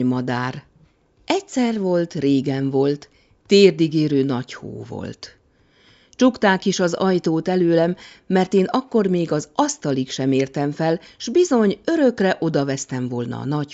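No faults in this speech recording; what's audible is ordinary call microphone processing, with the lowest bass trimmed by its high-pass filter and nothing above 8 kHz.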